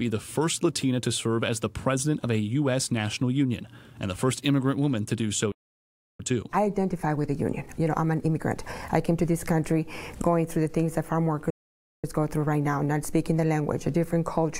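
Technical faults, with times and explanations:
5.52 to 6.20 s, playback stall: the sound cuts out in mid-flow for about 0.68 s of silence, then resumes where it stopped. The player likely ran out of buffered data or had its output thread blocked, so nothing was sent until it recovered.
6.20 to 9.20 s, time-compressed catch-up: the audio runs hurried, about 1.15 times normal speed, at unchanged pitch. The player is working off the backlog from the gap by removing small slices and cross-fading the joins.
11.50 to 12.04 s, playback stall: a second dropout, about 0.53 s of silence in mid-flow, after which the sound carries on from the point it left off. This likely comes from another buffer underrun or a brief block on the playback thread.
12.04 to 14.59 s, time-compressed catch-up: the sound again rushes along at about 1.1 times normal speed, pitch intact, as short pieces are cut out and blended to close the delay until the clip ends.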